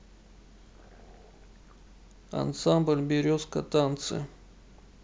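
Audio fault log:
Nothing to flag here, as the speech comes through without any trouble worth noting.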